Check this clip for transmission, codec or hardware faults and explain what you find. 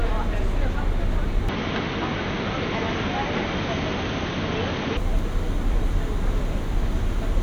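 One fault stands out. From 1.49 to 4.97 s the sound turns dull and drops about 5 dB with nothing above 6.4 kHz, likely the input switched to a poorer device, bringing faint new background noise.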